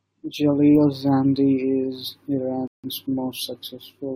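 At 2.68 s the speech cuts to silence for about 0.16 s, then picks up exactly where it stopped: a rebuffering stall, the player starving for downloaded audio and waiting for more. Unlike a dropout, nothing is skipped; the gap simply adds time.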